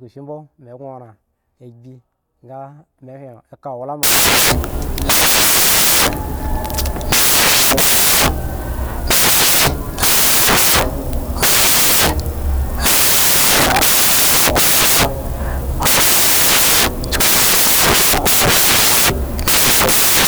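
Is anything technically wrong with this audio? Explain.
Yes. From 4.03 s to the end, the samples are built from the wrong bytes. Low bits become the loud part, so the speech is heard as loud, harsh broadband noise, close to white on loud sounds.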